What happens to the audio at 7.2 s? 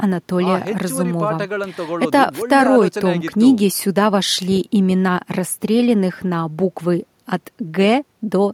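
Nothing goes wrong at 7.2 s: the speech plays through that moment intact, with no dropout, click or distortion.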